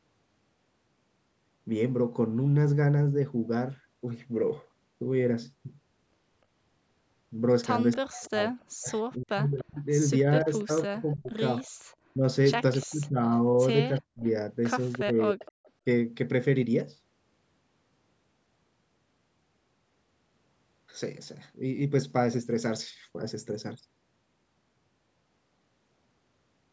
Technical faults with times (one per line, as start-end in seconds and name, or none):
7.92-8.65 echo leak
7.97-15.86 speech suppressed in double talk
9.57-15.71 echo leak
11.76-11.85 background gated by the echo canceller